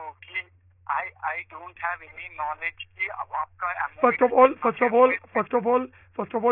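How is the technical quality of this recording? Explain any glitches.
No audible glitches or faults.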